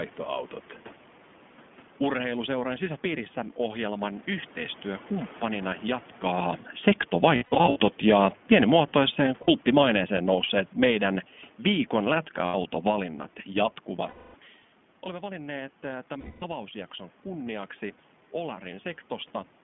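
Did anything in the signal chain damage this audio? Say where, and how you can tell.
Yes. The iLBC codec stage, throughout: the sound is confined to roughly 150 Hz to 3.4 kHz, with a rough, synthetic edge that fits 15.2 kbps iLBC in 20 ms frames.

Automatic gain falling, 7.09 to 13.12 s: call processing judged the input too loud or its background noise too strong and eased its gain down by about 8 dB, so the speech and background sink together.

Lost iLBC frames at 7.36 to 7.78 s (scattered gaps, the longest around 70 ms), 9.42 s (60 ms), 12.46 s (80 ms), 14.08 s (260 ms) and 16.20 s (220 ms): network packets went missing, and the decoder filled each gap with a repeated, buzzy pitch cycle before recovering at once.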